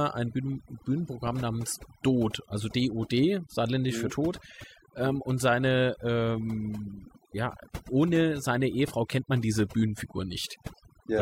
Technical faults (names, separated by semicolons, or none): overdone noise removal